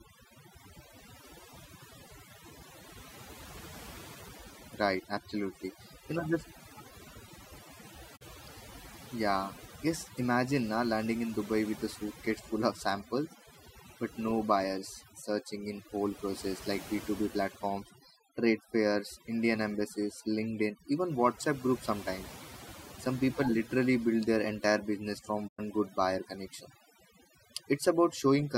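Speech, with overdone noise removal across the whole clip. The noise reduction was set too aggressively, so any frequency band whose level came close to the estimated noise floor was pulled far down or switched off entirely. Low-level parts of the speech fell under that threshold and were removed along with the noise. The result is a background that drops away and breaks up into twinkling specks. There are also two digital broadcast dropouts, where the receiver muted after losing the signal or rejecting corrupted frames and stayed silent until valid frames resumed. The first runs from 8.16 to 8.23 s. The second runs from 25.47 to 25.60 s. Each is a short hole that fades out over about 20 ms. The lost audio spans about 32 ms in the first and 96 ms in the second, which fits one and three 32 ms frames respectively. The material transmitted during those gaps is not recoverable.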